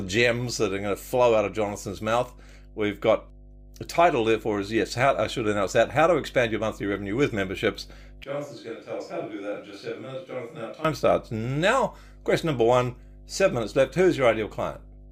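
A steady mains hum at 50 Hz runs through the whole clip, sitting roughly 25 dB below the speech. It comes from the power line leaking into the signal path. Unlike broadband hiss or rumble, it is a fixed, pitched low tone.

From 8.24 s to 10.85 s, after "monthly revenue with memberships" and until "starts now", the speech abruptly turns hollow and roomy, thinner in the bass and about 10 dB quieter, with faint room noise. This is a switch to a distant microphone, likely because the close microphone's signal dropped out. A simple level dip would not change the tone, and added reverb would not cost bass or raise background noise.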